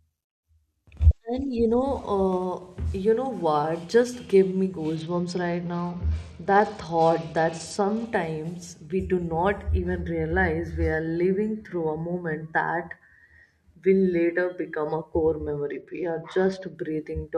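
Twice in this speech clip the Bluetooth link came under pressure and the SBC encoder cut its bit pool, a Bluetooth SBC bit pool drop, from about 4.96 to 8.06 s and again from 15.66 to 16.75 s, just after "a core". The dull sound fits a fall from a bit pool near 28 to around 10, roughly 84 kbps. The highest sub-bands get almost no bits and the rest are coarsely quantised, so the treble goes dull and a gritty noise rides on the sound until the rate recovers.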